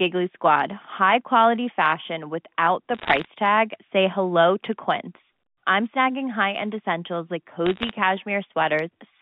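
From 2.95 to 3.28 s, and again from 7.66 to 7.91 s, the speech is peppered with sharp ticks and crackle. These are bit errors on a digital phone line. Each flipped bit spoils one G.711 sample. Roughly half a percent of bits are hit.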